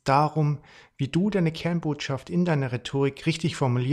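No technical faults can be heard in this speech recording.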